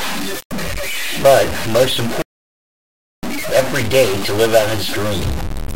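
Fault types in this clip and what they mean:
Stuck bit: Throughout the clip the speech carries a grainy or harsh, buzzy distortion, and even the pauses between phrases are filled with a gritty noise floor instead of falling quiet. The likely cause is one data bit held permanently at 0 or 1 by a broken line or converter, so roughly half the samples are offset by that bit's weight. Near-silent passages keep crossing zero, which flips the error back and forth and turns the gaps into noise.
Playback stall: From 2.22 s to 3.23 s the speech cuts out mid-flow and the output drops to silence for about 1.01 s, then carries on. The sound does not fade or glitch into the gap. It simply stops dead. That abrupt hole points to the player's output going unfed, likely because its buffer ran dry or its audio thread was blocked, until data arrived again and playback resumed.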